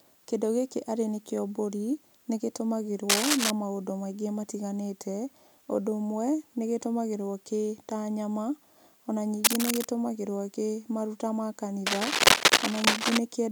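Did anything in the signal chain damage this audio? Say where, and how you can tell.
Yes. Three bursts of cable scratch noise sit over the speech, pointing to the analogue wiring stage: 3.09 to 3.51 s, just before "maũndũ maingĩ matiganĩte", 9.44 to 9.86 s, and a longer stretch from 11.86 to 13.18 s, right after "gĩ maruta ma". Each is a dense, irregular crackle standing a few dB above the speech. The likely cause is a worn cable or connector being moved, its contact resistance fluctuating rapidly.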